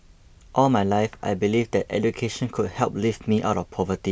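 Nothing stood out as a technical problem on listening to the recording.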